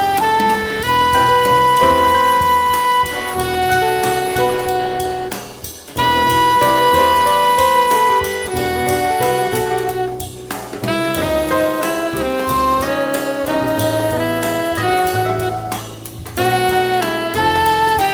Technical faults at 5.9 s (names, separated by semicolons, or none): none